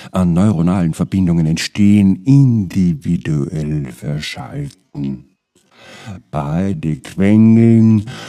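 At 1.66 s, a time-stretched section begins and runs to the end. The pace abruptly drops to about half speed, 0.52 times, while the pitch holds steady. The sound drags. Software likely stretched it by repeating short pieces.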